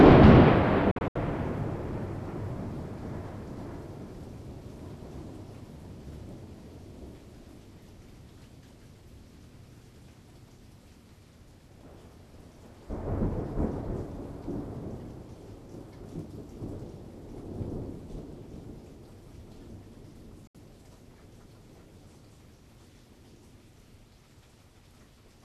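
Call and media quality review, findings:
Digital broadcast dropout, 0.91–1.16 s: sound mutes in several short holes, about 144 ms gone, longest 72 ms; again at 20.47–20.55 s, one 72 ms hole. Receiver muting after failed frames, fits 24 ms frame loss.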